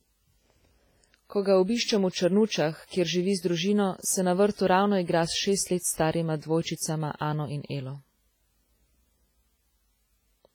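It's a speech clip with heavy damage throughout: a ringing, washy quality and hiss that breathes with the voice, likely WMA compression at a low bitrate, maybe around 24 kbps. Right after "s šest let starima" there's pre-echo, with a short hiss smearing ahead of attacks at 6.62–6.66 s (about 35 ms) and 6.76–6.80 s (about 48 ms). Block-spread quantisation noise is leaking into the quiet moment just before each attack.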